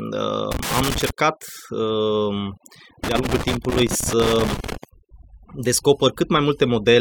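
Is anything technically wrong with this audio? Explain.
Yes. The speech carries overdone noise removal from start to finish, and loose connector crackle breaks in twice.

Throughout the clip, the background drops and breaks up into twinkling, warbling specks. That is noise reduction set far too aggressively: wherever a frequency band sits close to the estimated noise floor, it is pulled down hard or shut off, and the quieter components of the speech fall below that threshold and vanish along with the hiss.

From 0.52 to 1.10 s, and again from 3.04 to 4.84 s, an irregular burst of crackle and scratching rides over the sound. This is loose connector crackle. A worn or dirty contact keeps making and breaking as it shifts, chopping the signal on and off in rapid, uneven bursts. Any DC present on the line adds pops at each break, which gives the scratchy texture.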